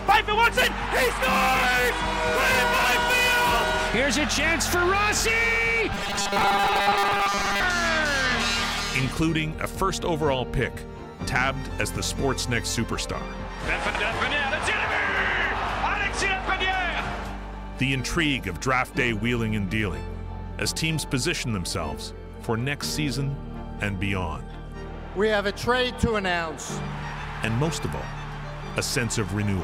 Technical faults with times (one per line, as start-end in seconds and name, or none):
5.93-7.63 robotic sound from repeated short buffers